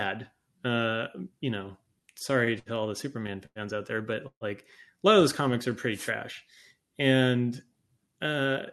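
From 1.99 to 2.69 s, repeated stalls (stutter) show up: packets kept arriving later than they were due, so the jitter buffer emptied five times. The receiver bridged each gap, the longest 68 ms, by extending the preceding sound, about 124 ms in all, so the speech hitches and drags without losing anything.

At 3.46 s a short stall from a late packet follows. One packet missed its slot, and the receiver held the last sound for 98 ms until it turned up, then resumed at the same point. A sound lingers too long, with a faint buzz or dip.

Between 4.28 and 4.44 s the speech halts for 135 ms as a call audio freeze. The last sound carries on as a fading buzz or hiss, then 70 ms of silence, before the speech picks up where it stopped. The likely cause is packets held up in transit draining the jitter buffer.

From 5.92 to 6.12 s a wireless microphone noise hit cuts across the speech. The analogue FM radio link faded as reflected signals cancelled, letting receiver noise surge up. 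It comes through as a brief swish of static over the speech.

From 8.07 to 8.54 s a jitter buffer speed-up occurs. The buffer had built up more delay than it targets, so the receiver trimmed short pitch-period slices repeatedly, roughly 50 ms altogether. Speech runs about 11% faster at unchanged pitch and sounds rushed. Throughout, the Opus call path limits the top end to 12 kHz.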